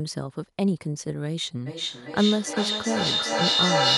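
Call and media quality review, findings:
Feedback echo between two devices, 1.66 s to end of clip. A second device in the room replays this mic, which recaptures it beyond the local echo canceller's reach. Speech recurs roughly every 0.4 s, thinning and ringing, building to about 3 dB above speech.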